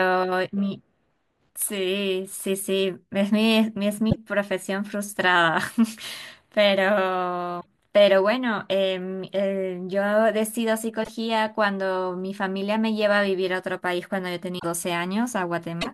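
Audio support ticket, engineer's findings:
Skips with brief glitches at 4.09, 7.60, 11.03, 14.58 and 15.81 s, roughly 60 ms each. Likely a broken MP3 bit reservoir: frames went missing, so the next two or three 24 ms frames decode borrowed bytes from the wrong frame.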